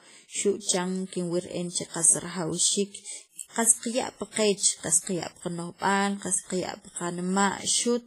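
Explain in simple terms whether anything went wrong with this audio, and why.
Throughout, the speech sounds ringing and washy, with hiss that swells alongside it and nothing above 15.4 kHz, likely from heavy WMA compression squeezing the file.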